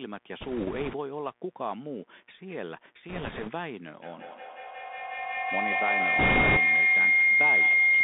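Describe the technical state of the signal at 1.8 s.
At 1.8 s, a mains buzz runs through the whole clip. Switching spikes twice in every 60 Hz cycle spray harmonics upward. The result is a steady, raspy buzz, well below the speech.

The Bluetooth CVSD headset codec also spans the entire clip. Its adaptive one-bit steps fit a 64 kbit/s stream. The band stops near 200 Hz and 3.6 kHz, with scratchy sibilants and granular hiss clearly audible.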